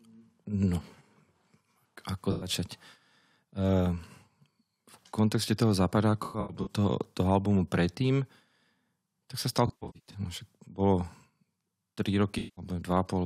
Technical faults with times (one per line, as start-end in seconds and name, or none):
2.31-2.49 AAC frame loss with concealment
6.23-6.69 AAC frame loss with concealment
9.67-10.19 AAC frame loss with concealment
12.38-12.65 AAC frame loss with concealment